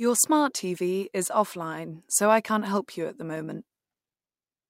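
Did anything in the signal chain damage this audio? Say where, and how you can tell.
No, nothing in the signal chain audibly damaged this speech.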